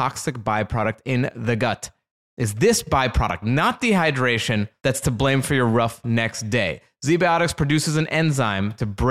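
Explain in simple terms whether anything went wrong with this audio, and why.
Nothing went wrong; this speech recording has no faults.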